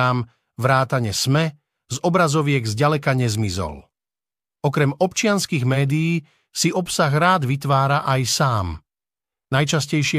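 Nothing stood out on listening to this speech recording.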